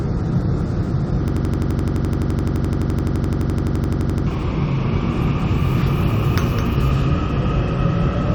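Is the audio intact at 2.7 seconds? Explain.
No. A system hang loop runs from 1.28 to 4.27 s: with the system frozen, an 85 ms slice, consistent with a 4096-sample buffer, repeats exactly at 11.7 Hz. This produces a rigid machine-gun stutter that replaces about three seconds of sound, unlike a dropout's silence.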